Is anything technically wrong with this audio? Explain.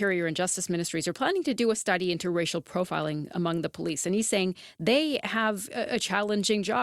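No, nothing is technically wrong with this audio.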